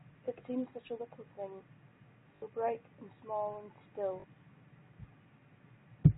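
At 2.36 s (60 ms) and 4.2 s (40 ms), packet loss with last packet repeated loops the previous chunk. This makes a robotic stutter, with identical waveform blocks, fitting 20 ms packets.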